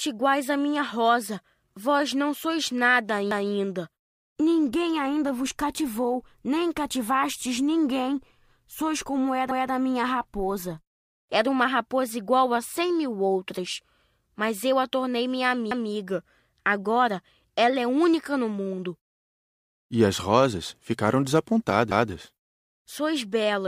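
The speech was cut into chunks about 6 s long that overlap: each new chunk begins 200 ms before the previous one finished, so that stretch of audio plays twice at every join. This overlapping-chunks fault gives a stutter at 3.31–3.51 s just after "não sois nada", at 9.51–9.71 s just before "a minha raposa", at 15.71–15.91 s after "eu a tornei minha", and at 21.91–22.11 s, evenly spaced six seconds apart.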